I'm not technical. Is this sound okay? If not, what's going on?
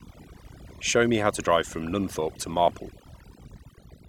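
No. The whole clip shows overdone noise removal. A noise reduction tool was applied far too strongly, so it shuts off any slice of the sound it mistakes for background hiss. That wipes out the background, which drops away and breaks up into twinkling, warbling specks, and it also strips away the quieter parts of the speech.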